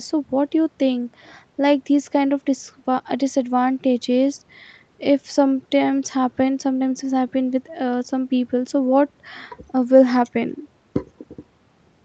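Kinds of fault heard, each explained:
The speech carries the ordinary signature of a call path, with the lowest bass trimmed by the microphone processing and nothing heard above about 8 kHz, a band edge and coding texture that fit Opus at a moderate bitrate, and no faults are present.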